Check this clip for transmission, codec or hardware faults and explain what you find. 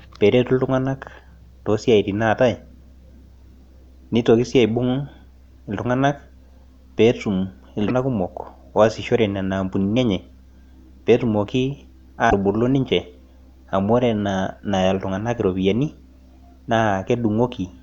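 Two short faults show up in this speech clip, both of the same kind.

Damaged data in a compressed stream, at 7.85 to 7.91 s and again at 12.27 to 12.33 s, each lasting about 60 to 70 ms. Corrupted bytes in the encoded stream leave the decoder unable to read those frames properly, so it loses its place and hunts for the next valid frame header before resuming. Each event is heard as a brief squawk or blip cutting into the speech.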